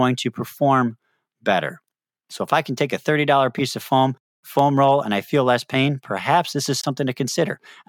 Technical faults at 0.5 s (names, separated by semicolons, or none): none